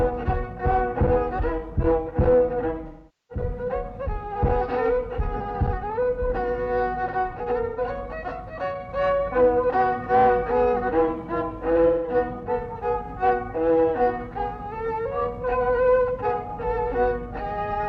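At 2.87 to 3.45 s, 7.69 to 7.80 s and 11.87 to 12.15 s the sound turns smeared and phasey, the longest patch lasting almost half a second. This is AAC frame loss with concealment: the decoder rebuilt the missing frames from the last good spectrum.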